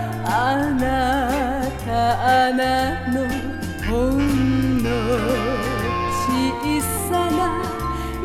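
Nothing is technically wrong with this audio clip.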